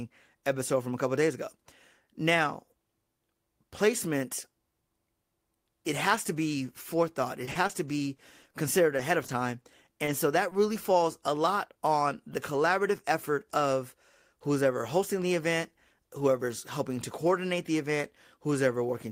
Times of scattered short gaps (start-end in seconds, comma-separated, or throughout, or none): 7.45-10.54